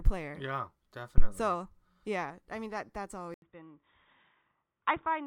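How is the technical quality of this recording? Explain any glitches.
The recording has two distinct technical faults: a short low-frequency thump early on, and an abrupt change in tone and level that lasts from partway through until the end.

From 1.18 to 1.30 s there is a phantom power thump: a supply switched on or off on the live input, and the step passed through the coupling capacitors. The deep thud dies away in about 26 ms. Unlike a handling bump or plosive, it has no acoustic onset or airflow character.

At 3.34 s an 80 ms silence is followed by duller, boxier speech with nothing above 3.8 kHz, a drop of roughly 10 dB, and a new faint noise floor. That is likely an input switched to a poorer device. A simple filter would not change the level and noise together.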